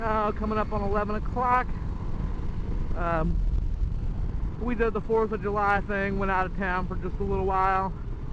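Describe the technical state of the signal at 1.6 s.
At 1.6 s the signal is intact, with no audible fault at that moment.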